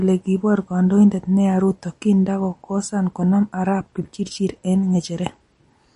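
MP3 compression runs through the whole speech clip, from start to finish. The likely cause is an encoder starved of bits, with a low bitrate of around 40 kbps. To fit that budget it removed everything above 10.6 kHz, so the treble stops short, and it zeroed weak frequency lines that flicker on and off between frames. The damage is plainly audible as a watery, swirling texture clinging to the speech.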